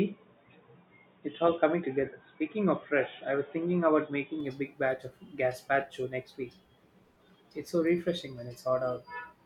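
From 0 to 4.40 s the speech sounds dull and boxy. Nothing passes above 3.8 kHz, and a faint new noise floor sits underneath. It clears abruptly before "a big batch of", with no gap or level jump. The input likely switched to a poorer device.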